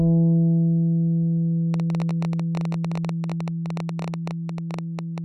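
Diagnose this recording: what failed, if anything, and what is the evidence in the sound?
A train of clicks runs from 1.74 s to 5.19 s. About fifty similar pops arrive at 13.7 per second, unevenly spaced. They peak about 5 dB above the sound. The stage is likely the analogue wiring or interface, which is injecting repeated pulses from nearby interference.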